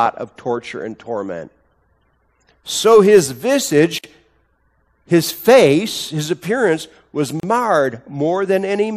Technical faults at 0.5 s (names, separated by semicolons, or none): none